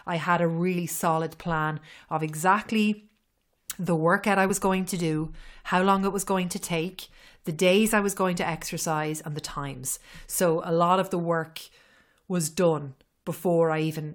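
A brief glitch cuts into the speech at 0.78 s, between "I had a" and "solid plan of exactly", and again at 4.49 s, after "the workout I". Both are damaged data in a compressed stream: the decoder hits corrupted frames, loses sync and skips ahead to the next frame header.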